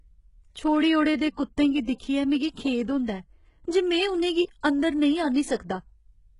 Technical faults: HE-AAC compression; pre-echo

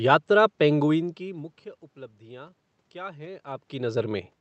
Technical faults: none

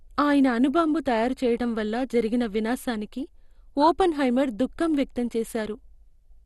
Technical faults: MP2 compression

